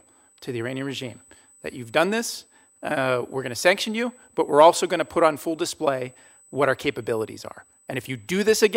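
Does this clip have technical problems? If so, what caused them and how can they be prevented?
Yes. A USB whine runs through the whole speech clip: a steady, fixed-pitch tone at 8 kHz, roughly 35 dB below the speech. It comes from the bus drawing current in 125-microsecond microframes, which leaks into the audio path through shared power or ground. Unlike mains hum, which sits at 50 or 60 Hz and its harmonics, this tone lies high at exactly 8 kHz. To prevent it, power the interface separately or use a USB isolator or ground-loop breaker.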